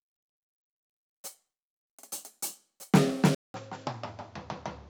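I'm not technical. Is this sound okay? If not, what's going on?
No. At 3.35 s the music cuts out for about 0.2 s, then returns quieter and duller to the end, likely an input switched to a poorer device.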